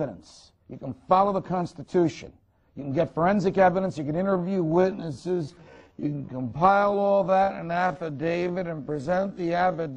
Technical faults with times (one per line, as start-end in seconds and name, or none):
4.21-9.96 time-stretched section